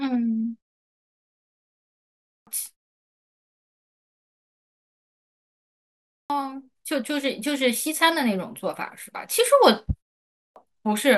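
A speech recording with clipped starts after a pause at 2.26, 6.10 and 10.33 s, each losing roughly 200 to 230 ms of onset. The output device drops into sleep during silence and has to wake before sound comes through again, so speech jumps in abruptly.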